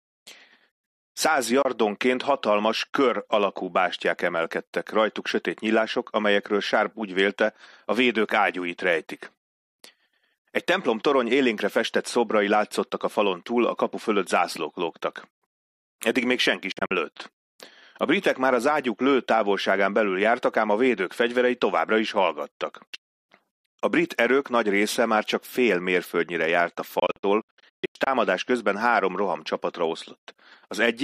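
Abrupt gaps of silence break the sound at 1.62 s, 16.7 to 16.9 s, and 27.0 to 28.1 s. Likely Bluetooth dropout: late packets are skipped, and the sound resumes further on.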